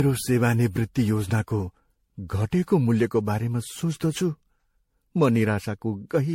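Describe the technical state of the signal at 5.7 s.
At 5.7 s the speech has the generation loss that runs through the whole clip: swirly, hollow and smeared, with nothing above 16.5 kHz. It's likely from being re-encoded as low-bitrate MP3, around 64 kbit/s, roughly ten times over, each pass stacking fresh quantisation damage.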